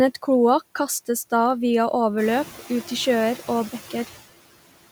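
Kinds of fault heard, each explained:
Noise suppressor artifacts: A suppressor judges which frequency bands hold steady noise and turns them down, frame by frame. Here it cuts the noise by about 15 dB throughout. The room noise, which rises by about 12 dB around 2 s, sinks between words and swells back under them.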